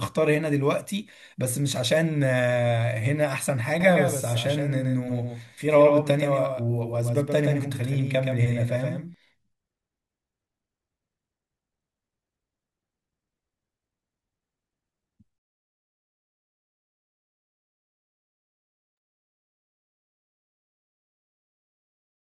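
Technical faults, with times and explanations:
3.80 to 9.14 s, doubled audio track: the speech is heard twice, with a second full-band copy roughly 150 ms behind and about 5 dB quieter. The copy has no reverberant tail and starts and stops abruptly, likely from a second, slower capture path mixed in.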